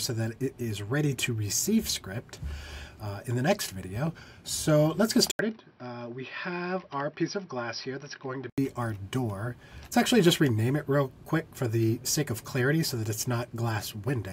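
From 5.31 to 8.58 s, after an 80 ms gap, the sound loses everything above 5.8 kHz, drops about 5 dB in level and gains faint background noise, likely an input switched to a poorer device rather than simple filtering.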